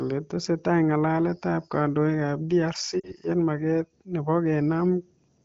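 Lost AMR speech frames at 3.00 to 3.12 s: about 40 ms of speech failed its checks, which fits two consecutive 20 ms frames. The wideband decoder reused its last good pitch and vocal tract settings with shrinking gain, giving a brief dip toward near silence before speech resumes.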